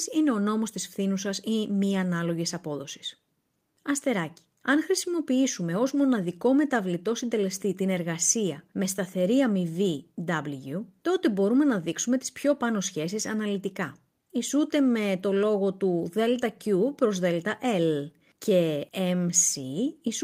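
No technical faults can be heard.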